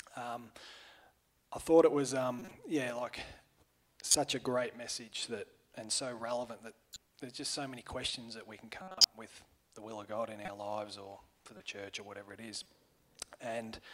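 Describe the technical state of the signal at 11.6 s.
A brief chirp-like blip of misplaced energy breaks through the sound from 11.57 to 11.60 s, quiet, peaking at about -40 dBFS. This is a corrupt frame decoded: bits inside a couple of consecutive compressed frames were flipped, and the decoder played them anyway. The damaged gain values and misread spectral codes put energy at the wrong frequencies for roughly the length of those frames, giving a short synthetic squeak that doesn't belong to the sound.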